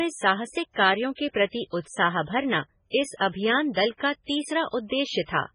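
From the start the speech has a watery, swirly quality, with nothing above 10.5 kHz and s sounds going metallic. That's likely MP3 compression at a very low bitrate, around 16 kbps, heavily damaged, with the encoder chopping treble and toggling weak frequency lines frame by frame.

At 4.87 to 4.91 s there's pre-echo: a short hiss about 40 ms ahead of a sharp attack. The codec spread that attack's noise across its whole block, so it leaks into the quiet just before and the onset sounds smeared.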